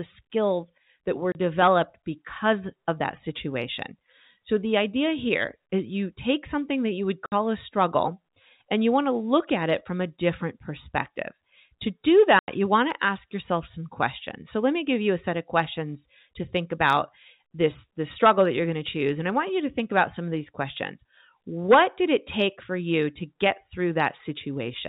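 Speech drops to hard silent gaps at 1.32, 7.26 and 12.39 s, lasting 30, 60 and 90 ms. This is packet loss filled with silence. The steps of 30 ms point to lost 30 ms packets. Hard edges and true silence set it apart from concealment smearing.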